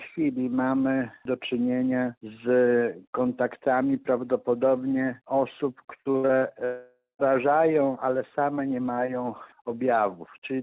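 Repeated packet loss (robotic sound) runs from 6.02 to 6.44 s: five short holes, the longest 65 ms, add up to about 180 ms of missing audio. Each hole is bridged by stretching the last fragment, so nearly half of that span is synthetic fill and the audio turns choppy with pieces missing before real signal resumes. A long network dropout likely follows from 6.65 to 7.22 s. About 540 ms of audio never plays. The last sound is extended as a fading buzz or hiss, and the final 170 ms or so of the stretch is silent before the audio returns with that section gone. Throughout the clip nothing is present above 4 kHz, which fits a narrowband telephone codec such as G.711 on the call path.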